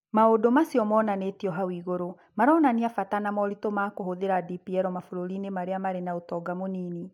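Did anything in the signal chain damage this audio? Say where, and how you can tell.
No, no damage from the chain.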